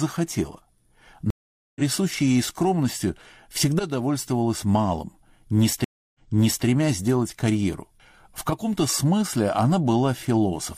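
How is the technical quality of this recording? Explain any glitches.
The recording has two stream reconnect dropouts, each a short silence followed by a jump in the audio's position.

From 1.30 to 1.81 s, the connection breaks and about 0.45 s of silence follows. A fresh decoder then picks up the live stream roughly half a second later, so some material is skipped. The waveform shows a flat gap, and the spectrogram shows a blank vertical band with a soft onset.

From 5.84 to 6.66 s, a 0.3 s silence occurs, and playback restarts 0.51 s earlier because the server resent a burst, so a stretch is heard twice. On a spectrogram, the pattern just before the gap reappears after it.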